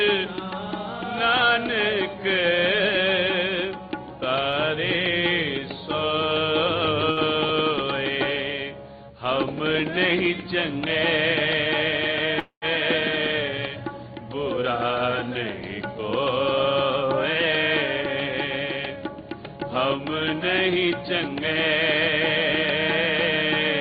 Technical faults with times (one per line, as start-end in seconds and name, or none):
7.11-7.20 burst of packet loss
12.39-12.65 call audio freeze
15.63-17.04 jitter buffer speed-up
19.10-21.36 jitter buffer speed-up